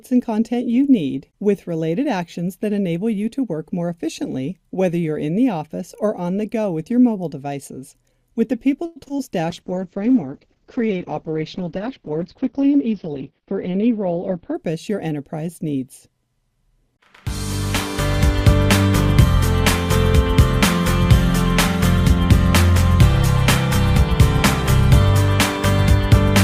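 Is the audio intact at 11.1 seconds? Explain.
No. From 9.52 to 14.61 s the sound turns coarse and muffled, with nothing above 6 kHz. This is a call bitrate drop, consistent with the encoder falling from about 64 to 8 kbps.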